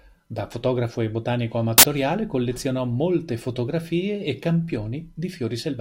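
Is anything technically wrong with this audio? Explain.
Yes. From 1.78 to 1.83 s the speech is broken by file tags played as audio: an embedded cover picture, compressed data, is read as samples. It sounds like a hard-edged burst of very loud white noise, appearing as a solid dense block on the waveform and an even broadband stripe on the spectrogram.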